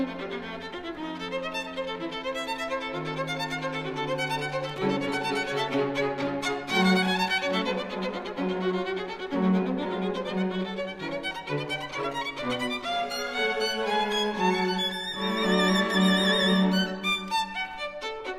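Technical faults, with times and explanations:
4.69 to 4.78 s, loose connector crackle: an irregular burst of crackle and scratching lasting under a tenth of a second. A worn or dirty contact is moving. It makes and breaks in quick succession, so the signal is chopped into ragged fragments.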